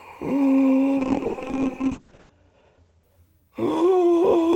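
A call bitrate drop runs from 0.99 to 3.09 s in this music. The encoder's rate falls from 32 to 7 kbps for about 1.3 s, with bandwidth narrowing from 20 kHz to 8 kHz. Coarser coding and lost highs leave the music muffled and rough until the rate recovers.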